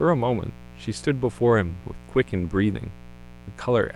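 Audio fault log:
Throughout: mains buzz, a steady, raspy drone sitting under the speech, roughly 20 dB below it. It comes from 60 Hz mains interference entering the signal path as sharp switching spikes, two per mains cycle, the kind a dimmer, rectifier or poorly shielded cable lets through. Because those spikes are so abrupt, they carry a dense series of 60 Hz harmonics reaching up to several kHz, which turns a low hum into a gritty buzz.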